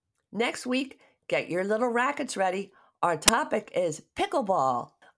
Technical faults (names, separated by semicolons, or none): file tags played as audio